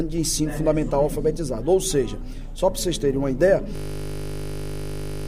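At 3.76 s a system hang loop takes over and runs to the end: the machine froze while the hardware kept replaying one 20 ms buffer, dozens of times. The exact repetition turns into a steady 50 Hz buzz, not a stuttering skip or mains hum.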